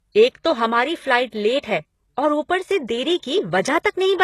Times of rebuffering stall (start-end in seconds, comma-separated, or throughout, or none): none